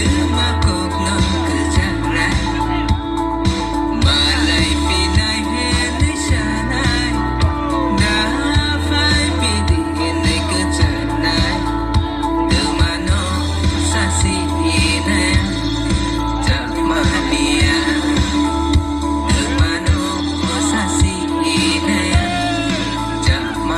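Nothing stood out as a technical fault on listening to the recording.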